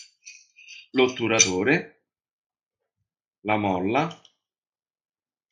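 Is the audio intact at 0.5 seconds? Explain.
Yes, the audio is intact at 0.5 seconds, with no dropout, click, distortion or other fault at that moment.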